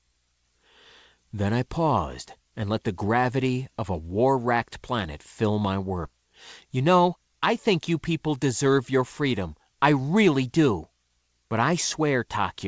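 At 6.05 s there is a skip ahead. Playback jumps forward with no gap filled in. About a second of speech is missing. The audio before and after the jump is joined almost directly. This points to a stretch being dropped, either lost in transit or discarded by an overflowing jitter buffer, while later audio was already queued. The result is an abrupt splice. The listener loses continuity without hearing any silence.

From 6.65 to 7.17 s a jitter buffer speed-up follows. The speech runs at 110 percent. The pitch stays the same. The receiver was holding more audio than it aims for. To shrink that delay, it cut out short pieces of one or a few pitch periods, many times in a row. Roughly 70 ms is removed in total. The passage sounds briefly hurried. The band-limiting of the G.722 call path, with nothing above 8 kHz, carries through unchanged.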